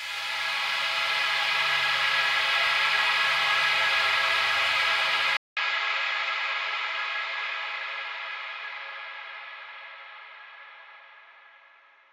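At about 5.37 s the audio drops out for 200 ms, then comes back duller, with nothing above 7.6 kHz, a faint new noise floor and the same level. That's likely the input switched to a poorer device, and it stays that way to the end.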